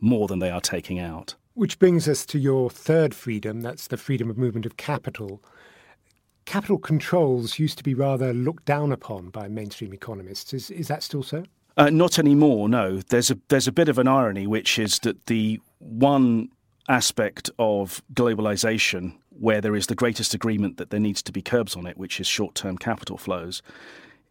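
At 14.86 to 14.88 s a single loud pop, roughly 10 dB above the speech, likely from an electrical pulse; unlike a dropout, the speech continues underneath.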